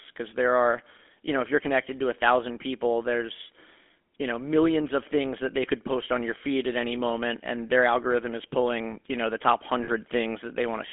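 Speech squeezed through the GSM full-rate codec the whole way: a buzzy, gravelly roughness, band-limited to roughly 250 Hz to 3.5 kHz, which fits the old 13 kbps coder. Then right after "you know the top", at 9.84 to 9.89 s, there's a lost GSM frames glitch: about 40 ms where the decoder repeats the last good frame, giving a brief metallic ring.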